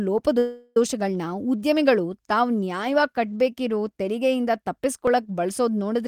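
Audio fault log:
0.38–0.77 s, call audio freeze: the speech stalls into a fading buzz for about 0.38 s, then resumes where it stopped, likely because delayed packets emptied the jitter buffer.
5.07 s, dropped buffer (overrun): right after "ಕಟ್ಬೇಕಿರೋ ತೆರಿಗೆಯಿಂದ" the sound jumps ahead, a skip of about 10 ms, likely samples overwritten before being read and then spliced together.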